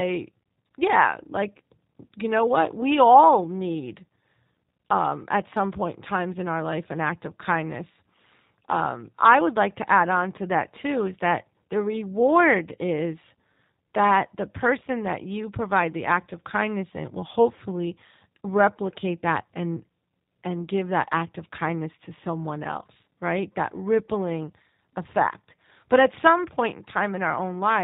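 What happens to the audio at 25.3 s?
At 25.3 s, as throughout the clip, the G.729 codec shows plainly: speech rebuilt from a filter and sparse pulses sounds rough and synthetic, capped at 4 kHz, consistent with 8 kbit/s coding.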